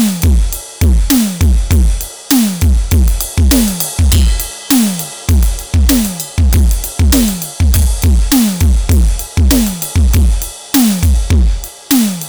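Hard clipping runs through the whole music clip: it's driven about 22 dB past the ceiling, so nearly a third of samples get flattened, giving harsh fuzz on every loud sound.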